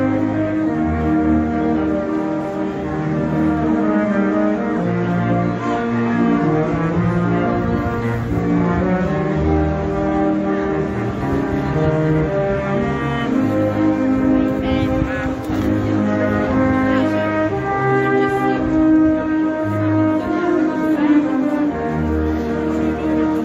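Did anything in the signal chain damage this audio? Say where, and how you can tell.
No, nothing in the signal chain stood out as damaging this audio when I listened to it.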